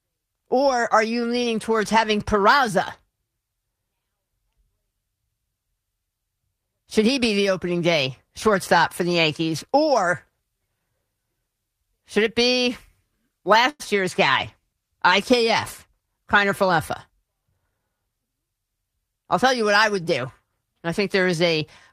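At 13.69 to 13.82 s, a call audio freeze: a 0.1 s fading fill, ending in 20 ms of silence, delays the speech, likely from late packets; the spectrogram shows a smeared, decaying band. From 14.41 to 15.99 s, a call bitrate drop from 32 to 18 kbps, lowest for 1.49 s, sounds rougher and muffled, with high frequencies visibly thinned on the spectrogram. From 15.91 to 17.87 s, a jitter buffer speed-up trims pitch periods, about a tenth of a second in all, so speech runs 6% faster at the same pitch. The waveform looks slightly compressed in time.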